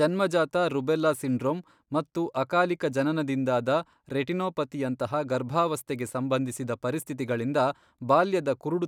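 No technical faults are audible.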